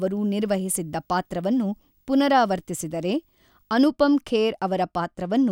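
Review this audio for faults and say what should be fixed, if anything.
A faint 50 Hz buzz with hash above it and a thin 15.6 kHz whine runs from 0.0 to 3.84 s, sitting well below the speech. This is video or display buzz, with a screen or video cable coupling into the audio at its 50 Hz field rate and 15.6 kHz line rate. To prevent it, route audio cables away from displays and video lines and use balanced, properly grounded connections.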